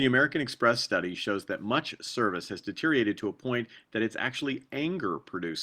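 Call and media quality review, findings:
No faults found in the speech audio.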